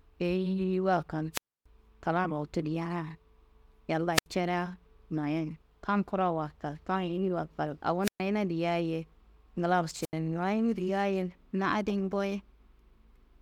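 Brief bursts of hiss break into the speech four times, each falling into a hole of near silence before the voice returns: at 1.33 to 1.66 s (a mute of about 0.28 s), 4.13 to 4.26 s (75 ms), 8.02 to 8.21 s (0.12 s) and 10.01 to 10.13 s (80 ms). These are wireless microphone squelch dropouts. The radio signal weakens, noise rises at the receiver, and the squelch then cuts the output until the signal recovers.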